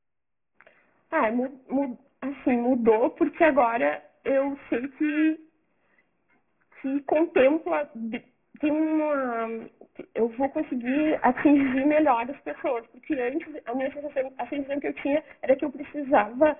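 From start to finish, the sample rate was cut sharply with no anti-alias filter first, which fits a drop from 48 kHz to 6 kHz. Everything above 3 kHz folds back below it, so the result is aliasing: energy lands at false, unrelated frequencies, with the folded components sitting only about 15 dB under the real sound. The audio turns gritty and metallic, and the spectrum is packed right up to a hard 3 kHz edge.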